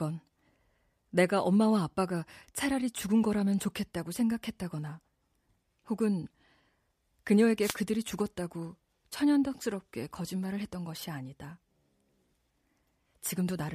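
At 7.60 s there's a wireless microphone noise hit lasting about 0.16 s, until 7.76 s. The radio link from the mic dips as reflected signals cancel, so receiver noise surges through and you hear a quick burst of static swishing over the speech.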